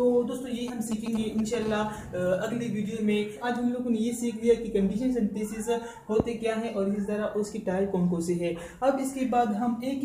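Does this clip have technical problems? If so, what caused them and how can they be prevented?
Yes. From 0.68 to 1.64 s a 2G phone close to the recording chain was exchanging short signalling transmissions with its network. The audio circuitry rectified those radio pulses, so the interference appears as GSM signalling bursts: a galloping dit-dit-dit of brief buzzes repeating at about 217 Hz, sitting roughly 10 dB below the wanted sound. Keeping phones switched off or in flight mode and well away from microphones, cables and preamps prevents this.

From 1.65 to 2.53 s a phone was in a call and began transmitting continuously in bursts 217 times a second. Rectification of that steady pulse train in the audio path produces GSM phone buzz, a hard, raspy 217 Hz tone with a dense stack of harmonics that has no relation to the recorded material, at about 21 dB below the signal. Shielded balanced cabling, RF-filtered inputs and keeping active phones out of the room prevent it.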